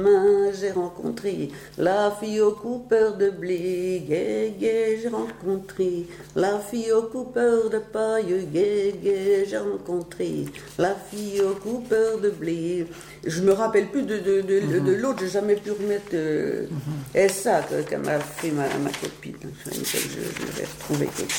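No technical faults can be heard anywhere in the audio. Nothing in the sound calls for a time stamp or a cause.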